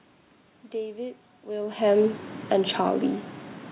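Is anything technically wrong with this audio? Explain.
Yes. From 1.69 s to 2.8 s there is automatic gain falling: the gain control treated the input as too loud, or its background noise as too strong, and lowered its gain gradually, by about 4 dB overall. The speech and the room noise behind it sink together, which separates this from the talker's own level shift at about 1.5 s. The band-limit at 4 kHz fits a narrowband G.711 mu-law call path.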